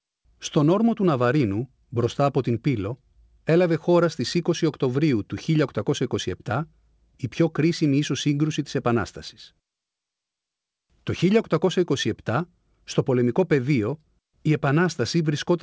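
No faults are audible in the speech; the audio passes through a call codec whose bandwidth stops at 8 kHz, which fits a G.722 wideband path, and nothing in the clip departs from that.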